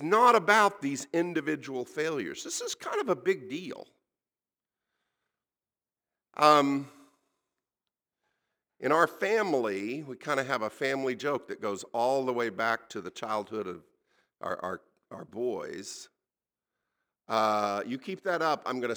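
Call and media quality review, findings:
Sample clock jitter throughout. Rough hiss rides on the speech, strongest on loud and sibilant passages, absent in pauses. Probable component: converter clock. Sampling instants wander a few microseconds rms, putting error about 35 dB below signal.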